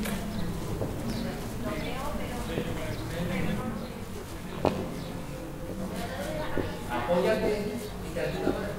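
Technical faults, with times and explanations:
3.62 s to the end, channel delay (comb filtering): one channel runs late by around 20 ms, and when the two are folded to mono the shared content cancels at evenly spaced frequencies starting near 20 Hz. The result is a rough, slightly doubled quality. Unlike flanging, the notches stay put rather than sweeping. Unlike an echo, the offset is too short to hear as a separate repeat.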